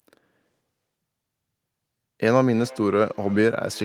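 From 2.52 s to the end of the clip at 3.85 s, the speech is followed by a feedback echo between two devices. A second device in the same room is playing the call audio aloud, and this microphone picks that playback back up. The local echo canceller only removes sound from its own loudspeaker, so the returning copy passes through. It is heard as a faint repeat roughly every 300 ms, peaking at about 24 dB below the direct speech.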